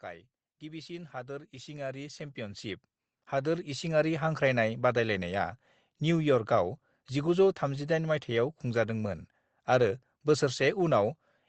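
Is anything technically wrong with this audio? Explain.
Yes. From 0.6 s to 4.42 s the level climbs steadily by about 17 dB, a case of automatic gain rising. The gain control judged the input too quiet and raised its gain gradually, so the speech and the background noise swell together over those four seconds. The audio also carries call-codec coding noise with the top end cut off near 8 kHz.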